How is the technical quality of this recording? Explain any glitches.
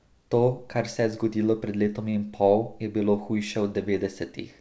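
One glitch stands out in speech that has passed through a call link; the spectrogram is empty above 8 kHz, which fits a wideband G.722 codec at about 64 kbps.

From 2.10 to 2.28 s, between "je zgodilo pred letom" and "pol je bilo", there is a short stall from a late packet. The jitter buffer ran dry, so the receiver stretched the last sound by about 37 ms, losing nothing. It is heard as a held sound with a slight buzz or dip, and it shows as a smeared, repeated stretch in the spectrogram and waveform.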